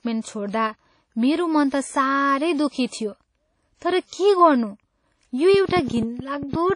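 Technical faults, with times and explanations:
Throughout, WMA compression: speech sounds washy and ringing, with hiss breathing along with it. Nothing remains above 10.1 kHz. A low bitrate near 32 kbps is the likely cause.
0.49 to 0.53 s, pre-echo: a short hiss leads a sharp attack by 39 ms. The codec spread its noise across the block, so it fills the quiet before the attack.
5.54 to 6.71 s, train of clicks: about fifteen clicks tick over the sound at an uneven pace, around 11.3 per second. They are about 10 dB above the signal. Interference or a faulty connection is likely.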